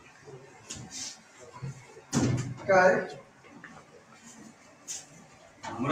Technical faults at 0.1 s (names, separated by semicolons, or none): noise suppressor applied to music or sounds